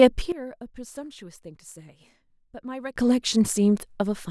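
At 0.32 s the speech drops abruptly by about 16 dB, and it snaps back up at 2.96 s. This is a sudden gain jump, likely from a digital gain change applied instantly with no ramp. Unlike a fade or compressor pumping, each step happens between one sample and the next, so there's no audible slope. The background noise falls and returns in exact lockstep with the speech, which marks it as a whole-signal level change rather than a dynamics effect.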